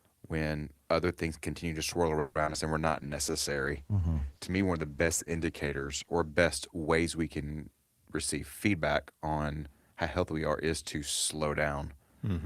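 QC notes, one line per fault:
2.19–2.56 s, repeated packet loss (robotic sound): four gaps in under 0.4 s, the longest 160 ms, left about half the stretch to be patched by stretching the last received sound forward, with some 100 ms never filled. Each patch replays the same spectral shape, so the speech turns choppy and buzzy, with a machine-like edge and short pieces simply absent before the next hole arrives.
2.82–6.45 s, call bitrate drop: after "and we're", the encoder's budget fell from 48 kbps to 15 kbps and stayed at the bottom for about 3.5 s. With so few bits the codec quantises coarsely and trims the upper band, so the speech loses its crispness and sounds muffled and watery, until the rate climbs back around "ways we can receive".
2.89–3.56 s, jitter buffer slow-down: just after "and we're", with its reserve running short, the receiver built up delay by repeating single pitch periods and slivers of pause over and over, adding about 67 ms. 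Playback runs at roughly 92% speed while pitch stays put, so syllables sound drawn out. It overlaps the start of the bitrate drop, so the dulling and the dragging are heard together.
8.67–9.93 s, jitter buffer speed-up: between "ways we can receive" and "how healthy we are", the buffer held more audio than its target, so the receiver cut out short chunks of one or a few pitch periods repeatedly, dropping roughly 150 ms. The speech plays at about 111% speed with unchanged pitch, making this phrase sound hurried and clipped, with syllables pressed closer together than the surrounding delivery.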